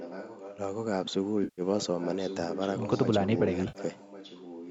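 A speech clip with a faint delayed copy of the talker trailing about 1.1 s behind, audible from 0 to 0.59 s, 1.79 to 3.06 s and 3.37 s to the end. It sits well below the direct voice, a little stronger in the middle stretch, and is likely an echo leak from a far-end loudspeaker that the echo canceller failed to suppress. A spectrogram shows faint, displaced copies of the harmonic patterns. Two AAC frame losses with concealment occur, at 1.44 to 1.62 s (140 ms) and at 3.68 to 3.79 s (70 ms), heard as smeared, phasey patches. The decoder rebuilt the spectrum from the last good frames, which shows as blurred, stretched energy without crisp harmonics, and the waveform envelope goes flat and smooth across each gap. The band stops at 8 kHz.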